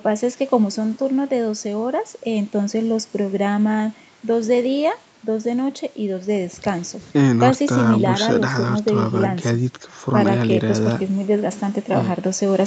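Nothing stood out on listening to this speech, which carries the ordinary band limit of a call path with no content above 8 kHz.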